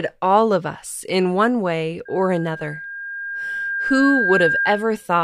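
Just after "us in one way", at 2.05 s, the microphone picks up its own loudspeaker and loop gain exceeds one at 1.6 kHz, causing loudspeaker feedback squeal: a pure tone swelling over roughly two seconds to slightly above the speech, lasting until 5.08 s.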